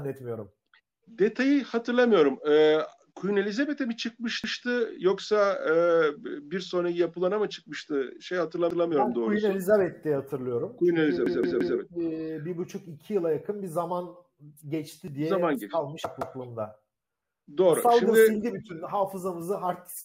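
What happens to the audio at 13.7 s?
Nothing goes wrong at 13.7 s; the audio carries on intact through that moment, with no dropout, click, glitch or other fault to be heard.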